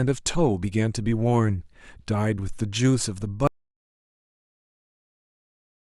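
At 3.47 s the speech just stops dead, and from there to the end, about 2.5 seconds, there's nothing but silence, with no room tone or hiss at all. That's an audio dropout to silence. The likely story is that the input went away, say a device came unplugged, a link failed or something got muted, while the recorder kept writing silence. Whatever was said after that point is simply gone.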